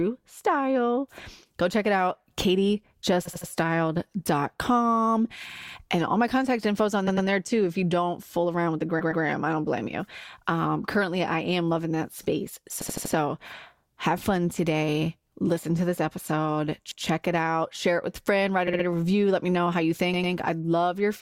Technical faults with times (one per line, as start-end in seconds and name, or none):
3.25-3.49 repeated frames
5.49-5.73 repeated frames
7.07-7.27 repeated frames
8.99-9.23 repeated frames
12.81-13.14 repeated frames
16.91-17.03 repeated frames
18.67-18.85 repeated frames
20.13-20.33 repeated frames